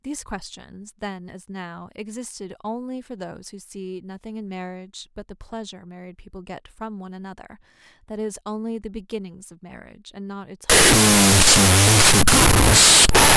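At 10.70 s the sound turns to loud noise until the end at 13.36 s. This is a wrong sample width fault, which fits 16-bit samples read as unsigned 8-bit. Mismatched bytes form false values. The speech survives faintly, at half speed and an octave low.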